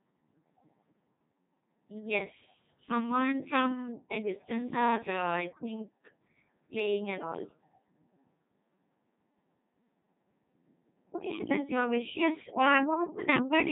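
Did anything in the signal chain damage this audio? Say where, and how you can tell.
Yes, at the codec stage: the whole clip has been through a Codec 2 vocoder. The speech is robotic and buzzy from start to finish, with nothing above 3.8 kHz, and the heavy damage fits a 2.4 kbit/s mode. The decoder rebuilt the voice from pitch, voicing and a spectral envelope, so the original waveform is gone.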